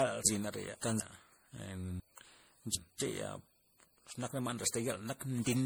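Speech, and the whole thing has a swirly, hollow, smeared quality with soft consonant attacks. That's likely generation loss, with the audio run through a lossy MP3 encode-decode cycle something like seven times. It sounds like a fairly low bitrate, around 64 kbit/s, with the extra smear coming from the repeated passes. There are also two spots of chunks out of order. From 0.25 to 1.0 s a 250 ms piece plays two chunks late, and from 2.0 to 3.0 s one lands three chunks late. Each spot sounds jumbled, with three hard joins.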